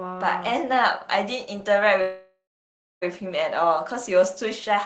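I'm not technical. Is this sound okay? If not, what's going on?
No. At 2.01 s the speech halts for about a second, until 3.04 s. This is a call audio freeze. The last sound trails off, then there is silence for about 0.6 s. The likely cause is call data arriving late. Speech then resumes where it stopped, with nothing lost.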